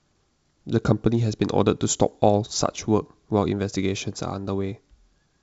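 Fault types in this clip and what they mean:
No faults can be heard in this speech clip.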